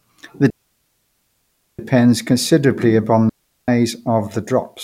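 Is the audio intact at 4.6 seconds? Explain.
Yes, the audio is intact at 4.6 seconds, with no dropout, click, distortion or other technical fault audible at that point.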